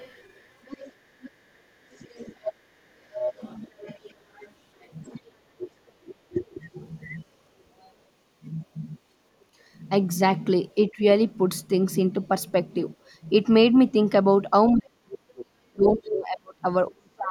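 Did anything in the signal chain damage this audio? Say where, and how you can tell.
Yes, the damage is in call processing, where the echo canceller likely failed to fully remove the far end's loudspeaker signal from the microphone. The other side's voice leaks through from 0.0 to 5.2 s, sitting about 20 dB below the main talker. It returns more strongly from 15.87 to 16.13 s, only about 10 dB down. The leaked voice comes through as a second, quieter voice layered under the main talker.

Speech suppressed in double talk shows up at the same stage. When both ends talk at once, the canceller likely can't separate the near talker from the echo and turns everything down. The main voice dips or breaks up from 2.12 to 3.02 s (roughly 20 dB, a fraction of a second in total), 5.17 to 6.35 s (about 35 dB), briefly at 10.96 to 11.01 s (about 10 dB), and from 14.69 s to the end (about 35 dB, around two seconds affected).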